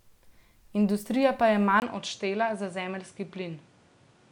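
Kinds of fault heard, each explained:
Input switched to a poorer device: The recording likely changed to a lesser microphone at 1.8 s, just after "pa je". After a 20 ms gap, the speech turns duller, with nothing above 10.5 kHz, drops by roughly 5 dB, and gains a new, faint background noise.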